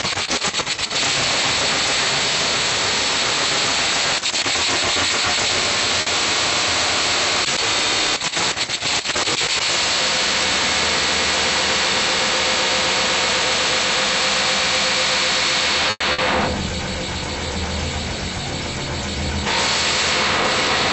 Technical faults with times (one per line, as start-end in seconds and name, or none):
6.01-6.09 short stall from a late packet
15.90-16.03 call audio freeze
16.12-16.21 burst of packet loss